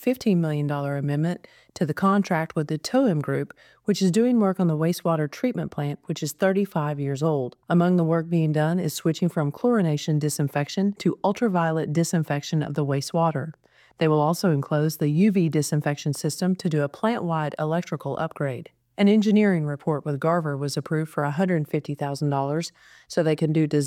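No technical faults can be heard anywhere in this audio.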